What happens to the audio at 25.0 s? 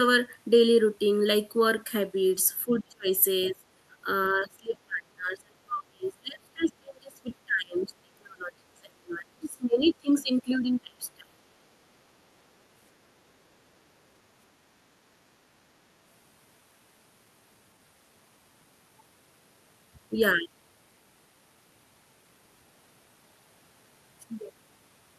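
At 25.0 s the speech is still hollow from channel delay (comb filtering): one channel lags under a millisecond, cancelling evenly spaced frequencies from around 700 Hz, seen as steady dark spectrogram bands.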